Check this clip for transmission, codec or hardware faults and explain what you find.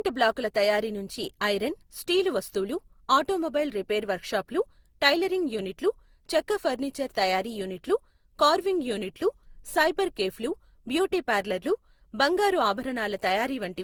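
One codec fault runs through the whole speech clip. Throughout, the sound is swirly, hollow and smeared, with blurred attacks: generation loss, likely from about seven repeated Opus passes at roughly 64 kbit/s, each adding fresh quantisation damage.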